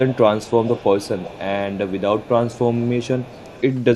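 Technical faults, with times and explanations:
0.05–0.19 s, 0.39–1.43 s and 1.72–3.62 s: echo leak. A faint copy of the speech trails it by 252 ms, about 15 dB down, then about 20 dB down in the last stretch, likely from a loudspeaker-side echo canceller letting residue through. A spectrogram shows the harmonic pattern repeated, dimmer, shifted a quarter second later.
0.24–0.36 s: speech suppressed in double talk. The talker's level sinks by up to about 20 dB for roughly a tenth of a second, likely because the canceller, facing both sides at once, ducked everything. The waveform visibly pinches, and the spectrogram dims.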